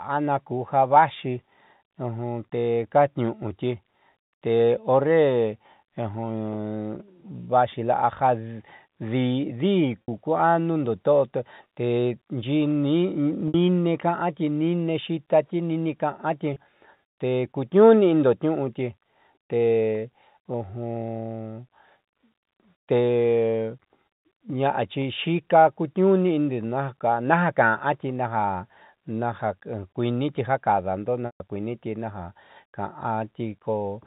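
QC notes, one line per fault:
10.02–10.08 s, packet loss with pitch repetition: a 60 ms gap, consistent with about three 20 ms packets, bridged by repeating the last pitch period, heard as a briefly held, buzzy tone.
13.48–13.54 s, packet loss with pitch repetition: the same 60 ms held buzz, just before "ka'anti niine xiitati niine".
16.54 s, packet loss with pitch repetition: a 20 ms loss, barely a flicker of sustain.
31.26–31.40 s, packet loss with pitch repetition: 140 ms lost, so the repeated period fades to silence before speech cross-fades back in over the narrowband telephone-band audio.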